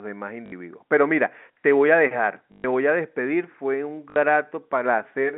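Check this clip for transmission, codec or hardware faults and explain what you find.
There are three short dropouts, all of the same kind, in telephone-band speech carried over G.711 with the 200 Hz to 3.6 kHz line band.

At 0.46 s, 2.52 s to 2.64 s and 4.10 s, a brief robotic stutter with a buzz is packet loss with last packet repeated. Lost audio (60 ms, 120 ms, 60 ms) was filled by replaying earlier packets, which fits 20 ms packets.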